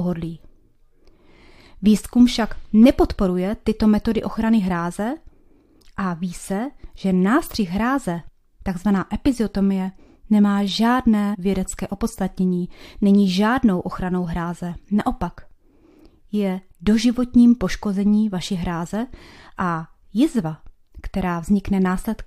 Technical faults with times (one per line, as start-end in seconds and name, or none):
8.27 damaged data in a compressed stream
11.33-11.36 damaged data in a compressed stream